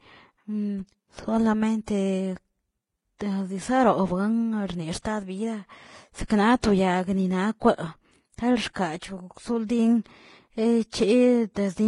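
Throughout the speech there is nothing above 11.4 kHz, and two layers of coding artefacts are heard together. That points to transcoding between lossy codecs, likely a low-rate Vorbis encode re-encoded as HE-AAC near 32 kbit/s, which spent bits on the earlier damage.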